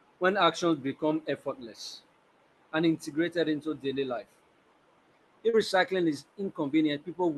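At 5.49 s the speech briefly smears. This is a short concealed packet loss lasting about 40 ms, ending near 5.55 s. That stretch of the call arrived too late for the decoder. The receiver covered the gap by extending the sound just before it, then blended back into the real audio. The result is a quick wobble in the speech, heard over the call codec's band limit near 12 kHz.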